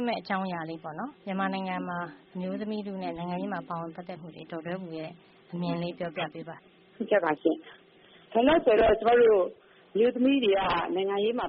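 Three brief chirp-like blips cut through the audio, at 3.16 to 3.21 s, 6.41 to 6.43 s and 9.56 to 9.60 s, the last one noticeably fainter. These are corrupt frames decoded: damaged bits in the compressed stream were played rather than concealed, so misread gains and codes put stray energy at the wrong frequencies for two or three frames each time, peaking around -35 dBFS and nearer -45 dBFS for the final one.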